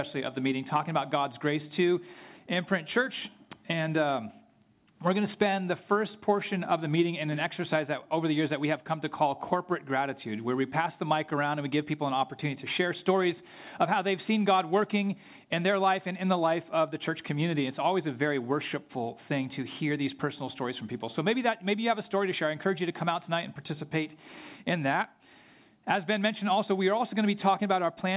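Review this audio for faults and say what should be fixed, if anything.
No faults found; nothing needs fixing.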